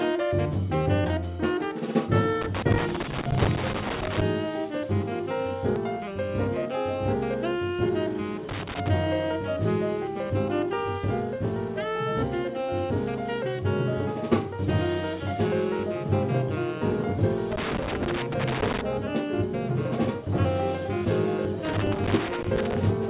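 Loose connector crackle runs from 2.42 to 4.22 s: a worn or dirty contact making and breaking chops the signal into an irregular scratchy burst. A skip ahead at 5.76 to 5.78 s drops roughly 0.4 s of audio, joining both sides directly with no gap filled. The same loose connector crackle returns at 8.49 to 8.88 s, 17.52 to 18.81 s and 21.65 to 22.77 s. All of this comes through a call path whose band stops at 4 kHz, consistent with G.711 A-law at 64 kbps.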